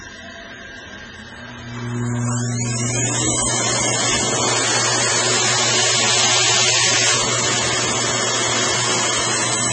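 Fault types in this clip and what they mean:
MP3 compression: Everything above 8.3 kHz is gone, and the rest sounds heavily watery and swirly, with weak detail flickering in and out and attacks smeared. That's likely an MP3 encode starved of bits, which fits a very low bitrate around 16 kbps.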